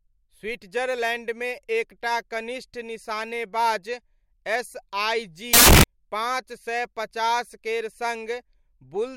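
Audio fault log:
5.54–5.84 s, samples built from the wrong bytes: for 0.3 s the speech turns to loud, harsh broadband noise as misassembled bytes promote low bits; unlike clipping, nothing of the waveform survives.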